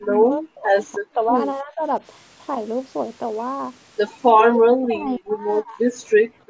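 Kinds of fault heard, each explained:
Speech suppressed in double talk: the echo canceller likely mistook overlapping talk for echo and turned the speech down, with dips reaching roughly 20 to 40 dB over several stretches.
Background gated by the echo canceller: the canceller clamped the microphone while the loudspeaker played, so the room sound drops by about 27 dB near the end, from 6.15 s.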